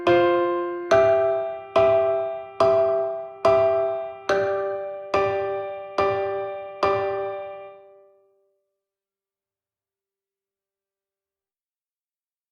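Nothing is technically wrong with this audio clip, so there are no times or causes to give.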